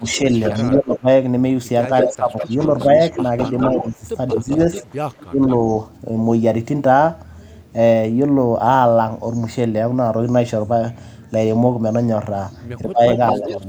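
From 0.0 to 5.41 s the speech dips in pieces, by about 15 dB at worst, for roughly one and a half seconds in all. This is speech suppressed in double talk. The echo canceller likely mistook both talkers for echo and turned everything down. Echo leak overlaps it. From 0.15 to 0.78 s a copy trails the speech by 201 ms at about -5 dB. From 2.01 to 5.57 s it trails by 203 ms at about -10 dB. Leftover loudspeaker pickup was likely sent back. Between 12.84 and 13.64 s the speech drops again, by about 15 dB, for roughly 0.4 s. Suppression during double talk is the likely cause. Inside that stretch, from 13.13 to 13.57 s, an echo leak returns 210 ms late at about -10 dB, likely from uncancelled loudspeaker sound.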